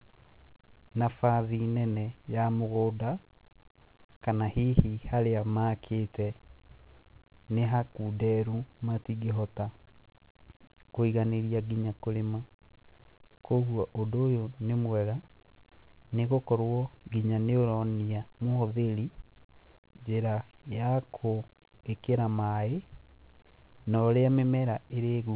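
No technical faults are audible in the speech, which ends sharply at 4 kHz and carries only the coding noise expected of a narrowband call path, consistent with G.711 mu-law.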